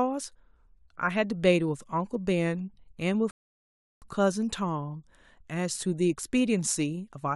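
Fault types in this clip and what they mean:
Rebuffering stall: the speech drops to silence at 3.31 s and picks up again at 4.02 s from the exact point where it stopped, so nothing is skipped. The player ran dry of downloaded audio and waited for more, adding 0.71 s of dead air.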